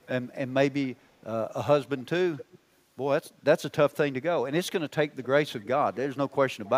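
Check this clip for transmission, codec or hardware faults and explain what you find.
One fault recurs through the clip: echo leak. A faint copy of the speech trails about 265 ms behind it at 0.01–0.11, 0.97–1.22, 1.98–2.59, 3.24–3.97 and 4.67–6.7 s, roughly 20 to 40 dB below the voice. The likely cause is a loudspeaker on one side whose echo canceller missed part of the microphone pickup and sent it back.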